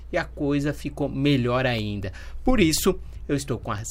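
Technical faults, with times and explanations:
0.79 to 3.78 s: periodic USB or driver dropouts. Tiny gaps recur once per second, about four in all. Each loses roughly half a millisecond of audio, replaced by silence. The sudden breaks in the waveform are heard as regular ticks.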